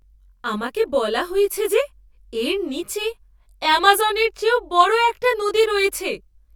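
Channel delay (comb filtering) runs through the whole of this speech clip. One channel arrives around 20 ms behind the other, and when the two are summed to mono, the shared content cancels at regularly spaced frequencies. The first notch falls near 30 Hz, with further notches repeating roughly every 50 Hz up the spectrum. This fixed comb of gaps gives the speech a rough, slightly doubled quality.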